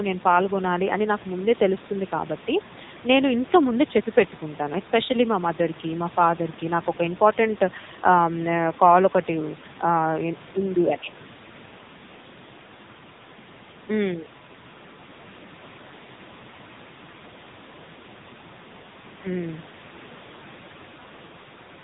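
From start to finish the speech carries the AMR narrowband mobile codec: nothing above 3.8 kHz, and a buzzy, synthetic voice with warbling room noise in the background. Unlike a plain low-pass filter, the vocal-tract model rebuilds the speech, and heavy damage fits a low mode near 6.7 kbps.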